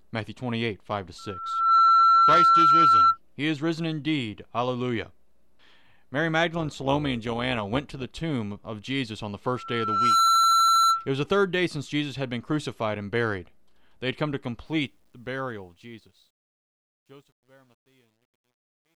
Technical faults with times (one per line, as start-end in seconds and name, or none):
1.18-3.18 loudspeaker feedback squeal
6.54-8.11 overlap-add ripple
9.51-11.09 loudspeaker feedback squeal
14.66-19.00 truncation distortion on a fade